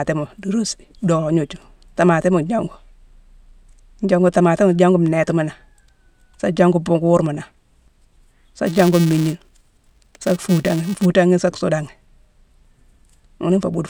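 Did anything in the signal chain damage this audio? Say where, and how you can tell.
Yes. From 8.66 to 11.06 s a filter restarted on every block somewhere in the block-processing stage of the driver or buffer path. Each block begins from silence, so a small transient starts every block, giving a buzz at 345 Hz that rises and falls with the speech level. That rate fits a 128-sample block. On a spectrogram it shows as a comb of harmonics at 345 Hz spacing, and the waveform shows evenly spaced ticks.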